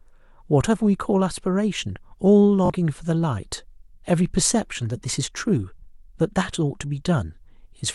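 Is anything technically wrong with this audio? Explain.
Yes. The speech has one Bluetooth stutter, from 2.66 to 2.70 s. For about 41 ms, fresh audio stops arriving at the receiver. The gap fits roughly two lost packets. With nothing new to play, the receiver repeats its last short buffer. That gives a brief buzzy, machine-gun flutter. Then the speech picks up further along, as though it had kept playing. The stretch covered by the stutter is simply missing.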